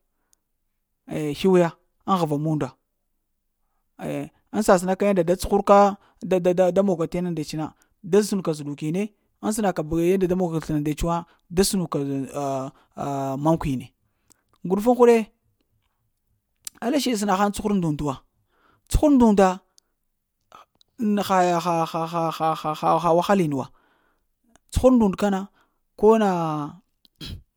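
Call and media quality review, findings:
No findings from the call and media quality review; nothing in the audio needs raising.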